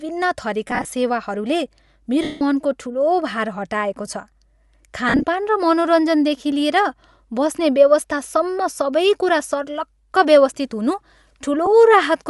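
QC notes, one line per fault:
Throughout: Bluetooth LC3 compression. The whole clip has a breathy, grainy edge on the speech. The upper spectrum sounds thinned and partly replaced by noise rather than real detail. This is likely LC3 coding, and the damage is plainly audible. The character fits the codec's 10 ms frames at a rate around 48 kbps, where the encoder drops much of the high band and the decoder fills it back in with noise.
0.68–0.92 s, 2.23–2.41 s, 5.09–5.24 s, 11.66 s: lost LE Audio frames. At each point the decoder repeats the last spectrum with scrambled signs, so speech smears into noise. From 0.68 s about 110 ms is lost in short bursts of roughly 20 ms across 240 ms. At 2.23 s a continuous 180 ms gap fades gradually toward silence. From 5.09 s about 80 ms is lost across 140 ms, the longest run around 50 ms. At 11.66 s there is one 10 ms blip.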